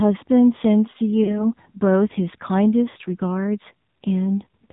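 AMR narrowband mobile codec, throughout: the speech is band-limited below 4 kHz and rebuilt from a vocal-tract model with sparse pulses, giving a buzzy, synthetic tone consistent with a low rate around 7.4 kbps.

Lost AMR speech frames, at 1.24 to 1.51 s and 2.90 to 2.97 s: about 40 ms and then 60 ms of audio were replaced by decoder guesses that reused the last good settings at falling gain. Each gap sounds like a drawn-out, fading warble, and the speech returns weak or rough.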